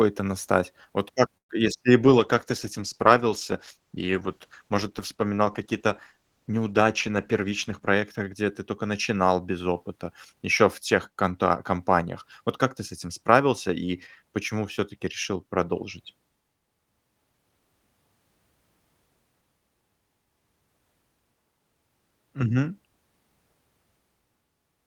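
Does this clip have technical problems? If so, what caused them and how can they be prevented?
Yes. From 1.37 to 1.51 s, just before "бы если и", there is a call audio freeze. The sound stalls into about 0.11 s of near-silence, then resumes exactly where it stopped. The likely cause is delayed packets draining the jitter buffer. Unlike packet loss, nothing is skipped; the call simply gains about 120 ms of delay. Prevention: give the network path more headroom or prioritise voice traffic (QoS) so packets arrive steadily.

From 2.04 to 7.95 s, after "как бы если и", a call bitrate drop takes the encoder from 32 to 13 kbps for almost 6 s. The speech turns coarse and muffled, with its upper frequencies trimmed away. Unlike a freeze or a dropout, the degradation is continuous and unbroken until the rate recovers. Prevention: ensure stable bandwidth or set a higher minimum encoder bitrate.

From 7.09 to 8.51 s, leading into "ты тока начинал без", a jitter buffer speed-up plays speech at about 108% speed. 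About a tenth of a second is removed in small pitch-period slices to shed excess delay. Unlike a resampling error, the pitch stays the same and only the pace is hurried. Prevention: reduce the bursty packet delivery that overfills the buffer.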